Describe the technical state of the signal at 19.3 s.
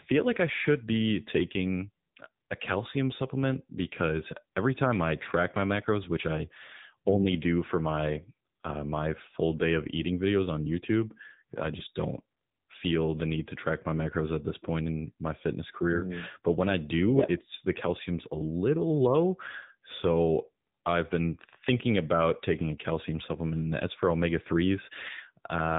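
At 19.3 s the speech sounds buzzy, synthetic and band-limited, with nothing above 3.8 kHz. This is AMR narrowband mobile codec damage throughout, fitting a low bitrate near 8 kbps.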